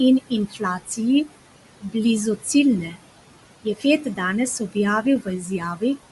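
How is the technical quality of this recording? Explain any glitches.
The recording is compromised by three processing faults: a noise suppressor that pumps the background, plainly audible codec coding, and the suppressor clipping parts of the speech. The room noise itself sits about 15 dB below the speech.

Noise suppressor artifacts run through the whole recording. The suppressor judges frame by frame which bands are steady noise and pulls them down by about 17 dB. Between phrases the background drops away, then rises again under the voice. Unlike codec damage, this comes and goes with the speech.

The Bluetooth LC3 compression is also constant. Nothing is present above 11.5 kHz, and the voice has a breathy, grainy edge where the upper band has been thinned and filled with noise. This is likely LC3 coding in 10 ms frames, which fits a 48 kbps setting. It stays steady rather than pumping with the speech.

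The speech cut by the noise suppressor occurs at 0.29–1.33 s, 1.80–1.95 s, 3.64–4.19 s and 4.59–5.82 s. The suppressor mistook quiet speech for noise and dropped it by up to about 18 dB, for about 850 milliseconds in total. Syllables and word endings sound swallowed, and unlike the background pumping, the voice itself is what fades.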